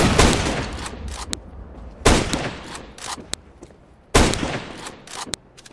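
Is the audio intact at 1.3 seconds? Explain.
No. At 1.33 s a file header played as audio: leftover WAV header bytes decoded as samples give one sharp snap, unlike a dropout's silent gap, suggesting pieces about 1 s long.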